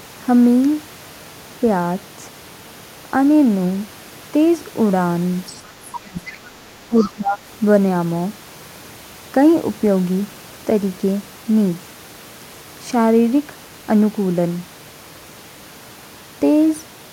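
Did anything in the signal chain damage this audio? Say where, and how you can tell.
Yes, in the call processing. There are short scraps of the other side's voice leaking through at 5.46–5.6 s, 6.27–6.37 s and 7.01–7.1 s. They're faint but get louder each time, from roughly 25 to 15 dB under the talker. The likely cause is the echo canceller leaving loudspeaker pickup in the mic.

At the same stage, there's speech suppressed in double talk from 5.92 to 6.39 s and again from 6.88 to 7.42 s. The talker dips hard, about 30 dB the first time and about 15 dB the second. With both sides talking at once, the canceller likely turned everything down together.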